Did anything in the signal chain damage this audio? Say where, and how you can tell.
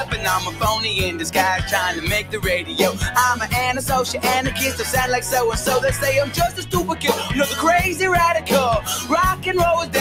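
Yes. The damage happens at the call-processing stage: a noise suppressor tuned for speech was applied to this material, which isn't speech. Throughout the clip the level swings by roughly 10 dB as the suppressor reads steady, sustained content and tails as noise and pulls them down, while onsets pass. That gives a pumping, thinning quality. A compressor or limiter reacts to how loud the sound is. This reacts to how steady it is, so quiet attacks survive and loud held tones still sink.

The sound is also cut by the noise suppressor at four points: 0.04 to 0.2 s (down about 9 dB), 0.44 to 0.61 s (about 8 dB), 2.22 to 2.41 s (about 10 dB) and 6.26 to 6.74 s (about 9 dB). In each case a sustained or decaying part of the sound sinks in level. A network dropout would instead remove everything, attacks included, and leave silence or a concealment artefact. Here the sound only ducks by several decibels.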